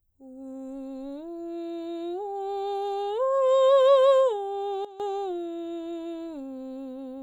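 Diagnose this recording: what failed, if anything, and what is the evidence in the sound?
A gain change in digital processing was likely applied without a ramp. This sudden gain jump drops the music about 15 dB from 4.85 s, snapping back at 5.00 s.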